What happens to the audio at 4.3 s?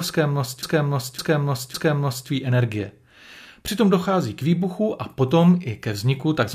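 Nothing goes wrong at 4.3 s; the audio there plays through cleanly with no audible fault.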